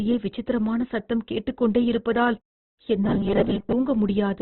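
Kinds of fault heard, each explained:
Opus compression: Throughout, the speech is likely Opus-coded at a very low rate, around 12 kbps in its music mode. Nothing sounds above 4.1 kHz, and heavy coding damage leaves the speech narrowband, grainy and rough, with tones turned noisy rather than swirling.
Robotic sound from repeated short buffers: From 3.04 to 3.72 s, a rigid metallic buzz at 200 Hz sets in. This likely comes from late audio, where the playback fills each gap by looping the last chunk, which fits a 5 ms buffer. About half the real audio is skipped, so the speech only roughly persists.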